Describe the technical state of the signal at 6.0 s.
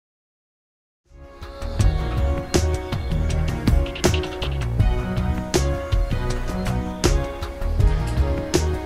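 At 6.0 s the signal is intact, with no dropout, distortion or other fault present.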